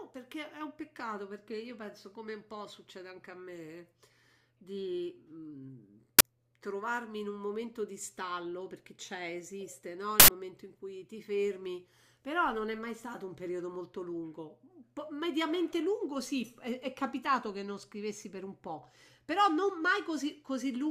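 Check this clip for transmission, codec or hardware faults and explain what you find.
Two uninitialised buffer faults break into the speech, at 6.19–6.21 s and 10.20–10.28 s. Blocks played before being filled dump leftover memory as loud digital noise, about 21 ms and 85 ms long, fitting 1024- and 4096-sample buffers. Unlike a dropout's silence, these are loud, block-length bursts.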